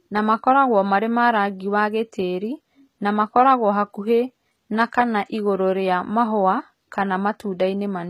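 From start to finish the speech carries plainly audible HE-AAC compression damage, likely from a low-bitrate stream around 20 kbps. The treble is rebuilt from copied lower bands, so s sounds come out gritty and metallic, and nothing survives above about 14.8 kHz.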